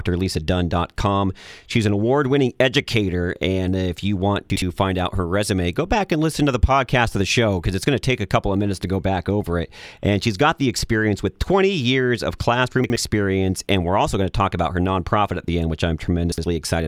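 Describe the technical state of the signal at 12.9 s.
Chunks out of order from 12.84 to 12.96 s, just after "years of": one 60 ms chunk of speech arrives a chunk late and plays after the one that should follow it. Nothing is lost, but the swap creates three hard joins, heard as a brief jumbled stutter.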